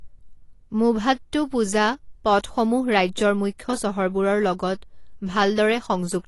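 AAC compression runs through the whole recording. The speech is dull and smeared, with a watery, fizzy texture on sibilants, and nothing is heard above 11.5 kHz. That points to the encoder likely dropping high bands at a low bitrate, around 32 kbps.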